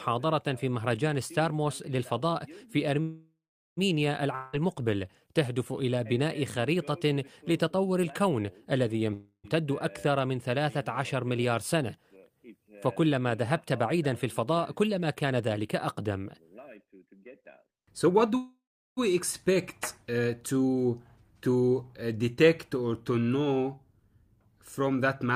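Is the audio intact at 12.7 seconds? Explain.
Yes, the audio is intact at 12.7 seconds, with no dropout, click, distortion or other fault audible at that point.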